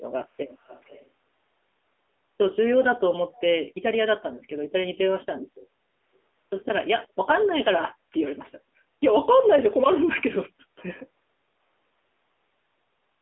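Speech throughout carries AMR narrowband mobile codec damage: nothing above 3.6 kHz, a 300 Hz to 3.5 kHz line band, and buzzy, synthetic voicing consistent with a low mode near 8 kbps.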